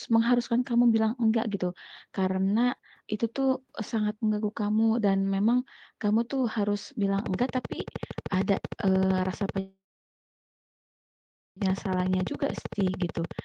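A speech clip with three faults. A train of clicks runs from 7.19 s to the end, about 13 per second, evenly spaced and about 10 dB above the speech, likely from electrical interference or a faulty connection. A call audio freeze lasts from 9.59 s to 11.58 s. Delayed packets likely emptied the jitter buffer, so a gap of about 2 s was inserted, nearly all of it silent, and no speech was lost. A jitter buffer speed-up follows from 11.88 s to 13.30 s. Short pitch-period pieces were cut, roughly a tenth of a second in total, so the speech runs 8% fast at unchanged pitch.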